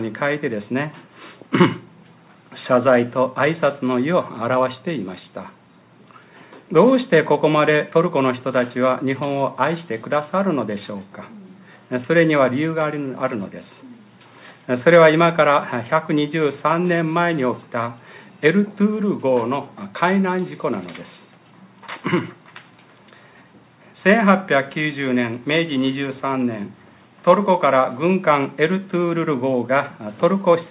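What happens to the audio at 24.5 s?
Nothing goes wrong at 24.5 s; the audio is intact at that moment, with no dropout, click, distortion or other fault.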